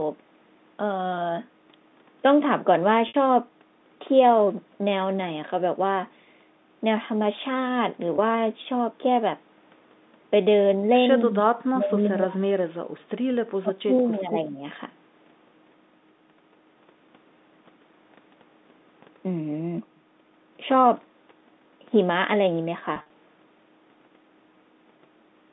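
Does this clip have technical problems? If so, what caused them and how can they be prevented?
Yes. There is packet loss with pitch repetition at 3.08–3.14 s, 8.16–8.18 s and 22.94–23.10 s. The receiver fills each missing stretch by repeating the last pitch period, which gives a brief held, buzzy sound. The first gap is about 60 ms, which fits three lost 20 ms packets. The second is a single 20 ms gap. The last loses about 100 ms in bursts of up to 40 ms, spread over 160 ms. A steadier network path or a larger jitter buffer with forward error correction would prevent this.

The sound also drops sharply at 11.26–11.58 s, 11.74–12.65 s and 13.56–14.63 s, by about 30 dB, 35 dB and 20 dB. The likely cause is speech suppressed in double talk. The echo canceller mistook the near talker for loudspeaker echo while the far side was also active, and attenuated both. Better echo-path modelling and double-talk detection, or a headset to remove the echo path, would prevent this.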